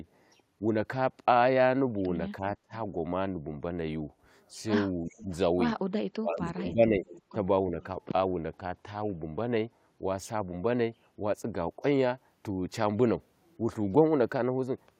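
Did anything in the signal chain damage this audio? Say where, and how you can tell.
Yes, call processing did. The speech drops out in short bites at 2.62 s, 5.07 s to 5.29 s, 6.14 s to 7.06 s (the longest, nearly a second, down by about 30 dB) and 7.33 s. It looks like speech suppressed in double talk, likely from an echo canceller that couldn't tell this talker apart from the far end's loudspeaker signal while both were talking, so it ducked everything.

There's also an echo leak, heard as a faint trailing copy of the speech about 338 ms behind, from 5.09 s to 5.37 s and again from 7.07 s to 7.22 s, sitting around 20 to 25 dB under the speech. That points to a speakerphone somewhere whose canceller didn't fully scrub what its mic picked up, so the leftover got sent back down the line.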